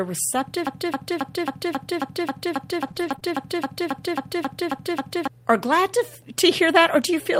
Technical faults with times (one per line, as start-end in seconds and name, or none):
0.67-5.28 broken-record loop
2.87-3.23 repeated packet loss (robotic sound)